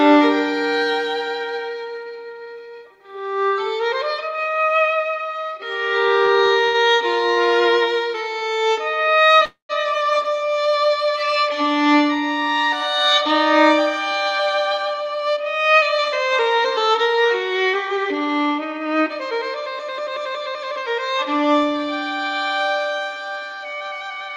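Four packets arrived late and the jitter buffer briefly ran empty, causing a short stall from a late packet at 6.25–6.31 s, 6.65–6.77 s, 7.34–7.40 s and 8.39–8.44 s. Each time the last sound is held for 26, 90, 26 and 23 ms respectively before resuming where it stopped. Nothing is lost, but the sound is stretched, with a buzz or dip.

From 9.45 to 9.72 s comes a call audio freeze, likely from packets held up in transit draining the jitter buffer. The last sound is continued for about 239 ms as a fading buzz or hiss that ends in about 120 ms of silence, then the audio carries on without anything missing.

Between 14.11 and 16.54 s there is a jitter buffer speed-up. The buffer held more audio than its target, so the receiver repeatedly cut out pitch-period pieces, removing around a fifth of a second. The sound runs at 109% speed with unchanged pitch and comes across as hurried.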